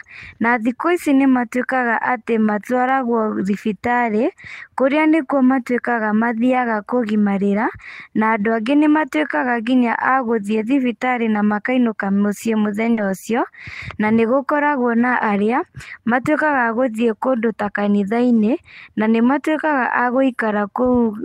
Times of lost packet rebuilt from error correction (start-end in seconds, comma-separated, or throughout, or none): 12.97-13.11